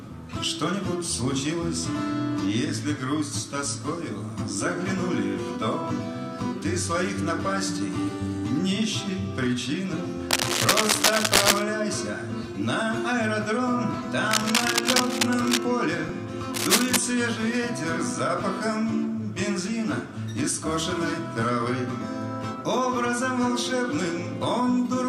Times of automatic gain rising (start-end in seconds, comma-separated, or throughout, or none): none